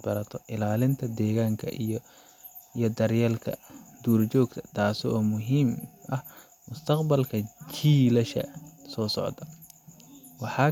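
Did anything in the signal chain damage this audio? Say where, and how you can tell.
No, nothing in the signal chain damaged this audio.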